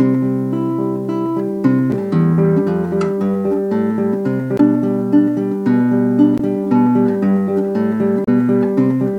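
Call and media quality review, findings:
Damaged data in a compressed stream: corrupt frames break decoder sync until the next header; brief glitches at 1.90–1.94, 4.56–4.60, 6.36–6.40 and 8.24–8.29 s.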